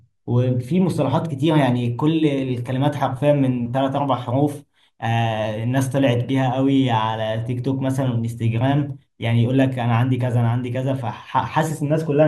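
No technical faults can be heard in this recording.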